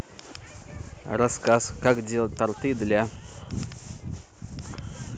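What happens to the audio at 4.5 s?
At 4.5 s the speech carries a DC offset, present throughout the clip: the waveform sits shifted off zero by a constant, eating headroom without any audible hum, unlike low-frequency rumble.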